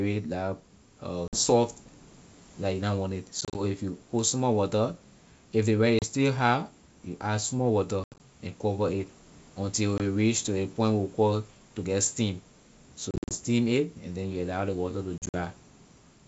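Packet loss on an ADPCM call cuts the speech at 1.28–1.39, 3.41–3.61, 5.99–6.05, 8.04–8.20, 9.98–10.01, 13.11–13.35 and 15.18–15.36 s. Each hole is hard-edged silence, 20 to 150 ms in total, and the longer ones are broken into runs of up to 80 ms. Afterwards the decoder's predictor and step size no longer match the sender's, so the speech resumes with brief, slight distortion. The waveform shows flat gaps, and a spectrogram shows blank vertical bands.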